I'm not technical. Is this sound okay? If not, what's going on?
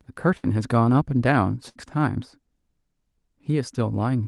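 No. Twice, at 0.37 to 0.46 s and at 1.69 to 1.78 s, a burst of packet loss hit the call connection. Each time, the receiver stretched out the last bit of sound to cover the gap, then jumped ahead, skipping about 60 ms of speech.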